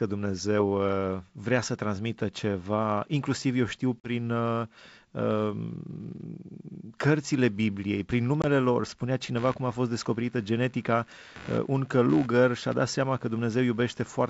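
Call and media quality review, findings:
Packet loss on an ADPCM call, 4.00 to 4.09 s, just after "ceva inclusiv eu știu": hard-edged 40 ms dropout, likely two packets. Decoder predictor and step size desynchronised from sender; speech resumes slightly distorted before reconverging.

Packet loss on an ADPCM call, 8.42 to 8.46 s, just before "lor spunea": 20 ms silent gap, one packet. Same adaptive-state mismatch, short distortion on recovery.

Computer activity noise, 9.37 s to end, starting after "lor spunea": buzzy pulsing near 70 Hz, about 25 dB below the speech, independent of the audio content. Processor or peripheral load currents coupling into shared audio ground. G.722 wideband coding shows no or only faint damage.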